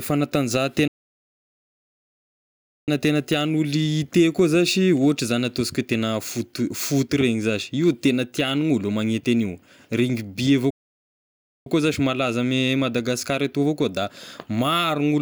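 Playback stalls, likely from the player starving for data, cut the speech into silence from 0.88 to 2.88 s and again from 10.70 to 11.66 s.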